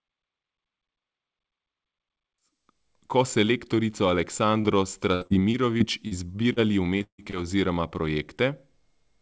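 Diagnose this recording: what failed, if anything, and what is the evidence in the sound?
The network stage failed: packets were lost or arrived too late at the receiver, and the decoder's concealment filled the holes. Short concealed packet loss occurs at 4.61 to 4.67 s, 6.53 to 6.59 s, 6.98 to 7.03 s and 7.30 to 7.45 s. Each time about 30 ms of audio is missing and 20 to 30 ms is synthesized by extending the preceding sound before blending back, heard as a brief smear or wobble. The last event also stretches the timing slightly.

From 5.15 to 6.14 s there is repeated packet loss with a robotic sound. Five separate gaps remove about 180 ms in total, and the longest lasts about 63 ms. Concealment fills about 18 percent of this stretch. Each patch is cut short by the next loss, so the audio turns choppy, with fragments dropped between the repaired sections. This points to a sustained spell of network loss or jitter, not a single event.

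A burst of packet loss runs from 7.03 to 7.21 s, directly after the 6.98 s glitch. About 150 ms of audio never arrived. The decoder extends the last sound and lets it decay, and roughly the final 90 ms becomes silence before the stream resumes further along, so the content in between is gone. The audio band stops at 8 kHz, which fits a wideband call codec, and a smooth fade-in completes at 3.31 s.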